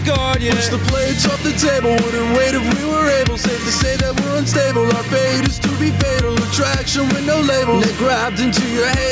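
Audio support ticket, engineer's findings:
Gain pumping, whole clip. Gain swinging around 10 dB. Dynamics squashed. Likely input gain set far too high, with a fast limiter clamping each peak. Call mic high-pass and 8 kHz ceiling normal.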